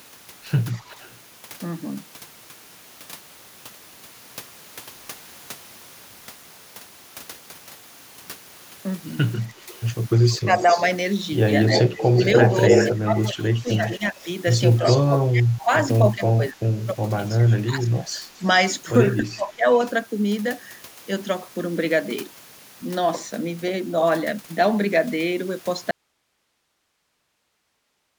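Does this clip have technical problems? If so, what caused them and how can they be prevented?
Yes. Between 0.78 and 1.19 s there's a faint echo leak, a delayed copy of the speech about 262 ms behind it and sitting roughly 30 dB down. Likely a loudspeaker on the far end whose echo canceller let a little of its mic pickup back through. Tuning or enabling that canceller properly, or using a headset, would stop it.

From 9.72 to 15.64 s the echo leak comes back much worse, with the copy now 287 ms late and about as loud as the speech itself. Same likely cause, just a canceller that's lost track of the echo almost completely. A headset or a better-converged canceller fixes it.

There's also speech suppressed in double talk. From 9.49 to 10.82 s the talker dips by about 10 dB for a few hundred milliseconds in total. From 11.86 to 19.65 s it gets heavier, with drops of around 20 dB over roughly four seconds altogether. 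That's likely the canceller ducking everything while both sides talk at once. Headsets, or a canceller with proper double-talk handling, would prevent it.

At 25.91 s there's an audio dropout to a faint residue. The speech cuts off abruptly and only hiss, about 50 dB down, remains to the end of the clip. The abrupt cut with a still-live path points to a likely loss of the input signal upstream, such as a muted or disconnected source. Checking connections and source stability avoids it.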